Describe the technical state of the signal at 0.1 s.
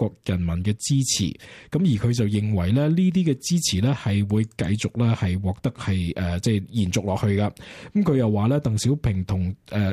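At 0.1 s the signal is intact, with no audible fault at that moment.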